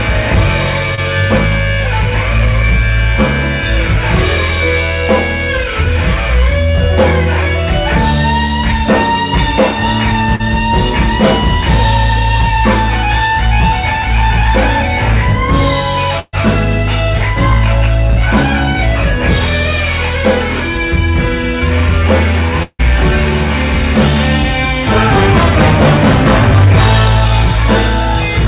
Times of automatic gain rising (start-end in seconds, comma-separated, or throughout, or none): none